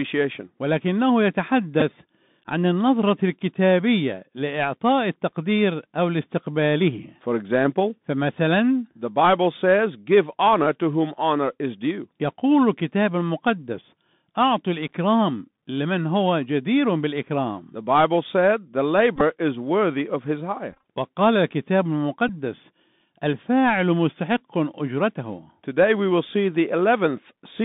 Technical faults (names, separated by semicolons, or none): Bluetooth CVSD headset codec; Bluetooth headset packet repeated